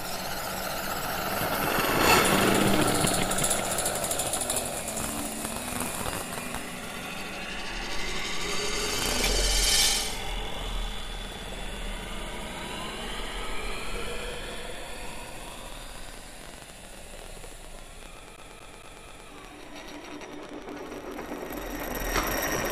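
From 8.26 s right through to the end there's a train of clicks, about 12.5 a second, spaced unevenly and poking up a few dB above the sound itself. They all have much the same shape, so it reads as a steady, ragged ticking laid over everything, pauses included. That pattern is likely interference from some nearby gear or a faulty connection or power supply, pushing in a sharp pulse again and again.

While that ticking is still going, at 18.36 s, it sounds like a CD stuck on one turn. The same 0.23 s chunk plays four times before it moves on at 19.28 s, with a tiny dropout at each jump. That's a scratch kicking the laser back a track at the same point on every revolution, which gives you that quick, even stutter of a skipping disc.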